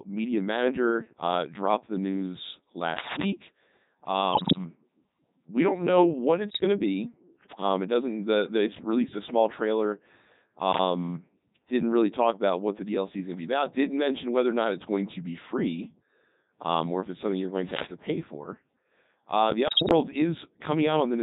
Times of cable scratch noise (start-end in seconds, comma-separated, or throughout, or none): 17.66-17.88